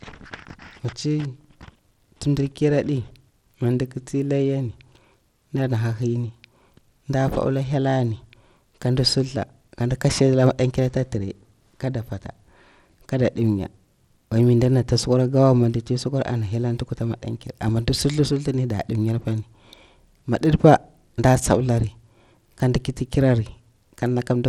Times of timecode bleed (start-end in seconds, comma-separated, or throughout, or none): none